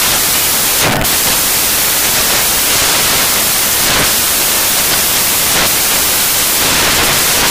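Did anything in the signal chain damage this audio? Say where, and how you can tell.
Yes: samples built from the wrong bytes in sample-format conversion, throughout. Swapped low bytes become loud broadband noise, close to white on loud sounds, a broad full-height spectrogram band.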